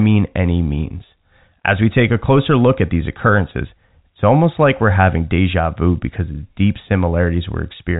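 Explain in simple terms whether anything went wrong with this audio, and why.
Nothing went wrong with this audio; the speech comes through as ordinary telephone-line sound, and there is no fault to point to.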